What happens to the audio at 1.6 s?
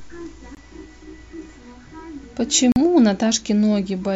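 Nothing goes wrong at 1.6 s; the audio plays through that moment intact, with no dropout, click or distortion.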